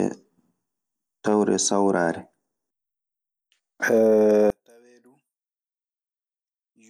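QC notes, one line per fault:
4.50–6.90 s: one channel inverted, likely. When the speech is folded to mono, the level drops by about 36 dB to the end. With one side's polarity reversed, the centred content common to both channels cancels, leaving only a faint difference signal.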